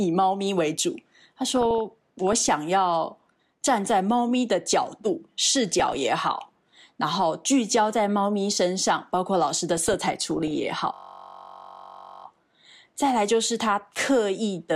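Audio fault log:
1.50–2.49 s, 5.80–6.04 s and 9.77–10.64 s, DAB burbling: short blips of noise and level jumps ride over the speech as individual sub-bands jump in level for a frame at a time. Weak reception lets a small fraction of a percent of bits slip past error correction into the MP2 data, corrupting samples and scale factors. On a spectrogram these show as scattered short rectangular blocks of energy confined to narrow frequency bands, switching on and off frame by frame.
10.94–12.25 s, system hang loop: a steady buzz at about 46.9 Hz replaces the speech for roughly 1.3 s. The machine or driver froze while the sound hardware kept replaying one 21.33 ms stretch of its ring buffer, which fits a 1024-sample buffer, about 60 times over. The waveform shows an identical short segment tiled end to end, and the spectrogram shows evenly spaced harmonics at multiples of 46.9 Hz.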